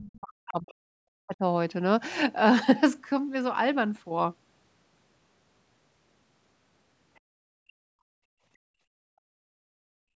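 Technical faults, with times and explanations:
0.00–1.42 s, speech suppressed in double talk: The opening speech sinks, at its deepest falling around 40 dB, for about a second and a half. The likely cause is the echo canceller hearing both sides at once, failing to separate the near talker from loudspeaker echo, and attenuating everything. Unlike background gating, the talker's own speech is lost here while the room sound is not the thing being cut, and the loss follows the overlap rather than a steady fade.
7.15–7.20 s, other side's voice leaking through: A very brief, faint scrap of a second voice appears, roughly 40 dB below the main speech and lasting only about 50 ms. It sounds like remote audio from the loudspeaker that the echo canceller did not fully remove before it reached the microphone. It differs from ordinary crosstalk or reverberation because it is a separate voice, not a smeared tail of the talker's own speech, and it vanishes almost at once.
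7.21–10.19 s, background gated by the echo canceller: Right after the leak, the room tone drops by about 31 dB and stays down to the end of the clip, about three seconds in all. The echo canceller clamped the microphone hard while the loudspeaker was active and never released it before the audio ends. This differs from double-talk suppression because the quiet room bed disappears rather than the talker's speech, and it differs from a noise gate because its timing follows loudspeaker activity, not input level.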